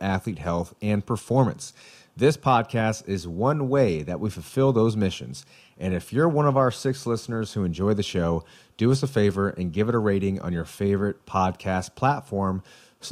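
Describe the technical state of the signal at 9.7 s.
At 9.7 s the speech signal is intact, with no audible fault at that moment.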